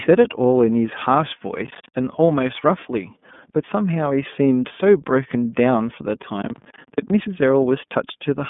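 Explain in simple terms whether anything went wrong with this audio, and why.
Two things went wrong. The whole clip carries the iLBC codec, a phone-call speech compressor that codes each 30 ms slice of speech on its own. Nothing above about 3.7 kHz survives, and little below 150 Hz, so the voice sounds thin and boxed-in, with a slightly rough, synthetic edge. Unlike simple muffling from a cheap microphone, the damage follows the speech itself, giving it a plainly audible processed texture rather than just dullness.

The second problem is processor overload crackle, heard from 1.66 to 1.94 s and again, longer, from 6.42 to 7.1 s. The computer handling the sound fell behind and missed a run of its short audio deadlines, each roughly a fiftieth of a second. Every miss left a tiny hole of silence with hard edges, and these holes strung together into gritty tearing. The first burst held around ten such gaps, the second around twenty. 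A single dropout would be one clean click or gap. This is a dense, rattling crackle that stops once the load eases.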